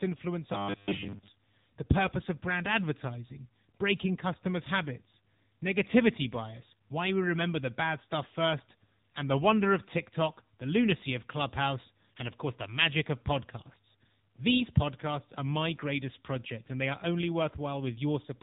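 AMR narrowband mobile codec damage runs through the whole clip. The speech has been squeezed through the 2G/3G mobile codec, which resamples to 8 kHz and rebuilds the voice from a vocal-tract model driven by a handful of pulses per subframe. Nothing above 3.8 kHz survives, so sibilants and air are gone. At this level the coding is plainly audible, with a buzzy, synthetic edge that fits a low bitrate of around 8 kbps.

Robotic sound from repeated short buffers appears from 0.53 to 1.42 s, just before "the purpose of brand". For that stretch the speech collapses into a rigid, metallic buzz at 100 Hz that still loosely tracks the syllables. The likely cause is audio arriving too late, so that playback loops the last 10 ms chunk over and over while most of the real signal in that window is skipped. The fixed repeat length imposes its own buzz on the voice.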